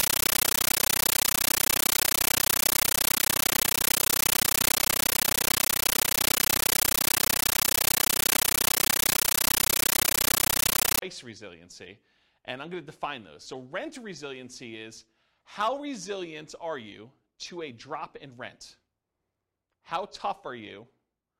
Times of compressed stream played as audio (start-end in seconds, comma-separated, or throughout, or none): 0.00-11.02